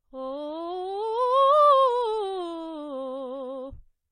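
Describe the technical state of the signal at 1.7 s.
At 1.7 s the music carries smeared, warbly coding artefacts of two different textures at once, present across the whole clip, likely from transcoding between lossy codecs: a low-rate MP3-like pass re-encoded by HE-AAC, nothing above 21 kHz. A single codec would leave only one artefact texture.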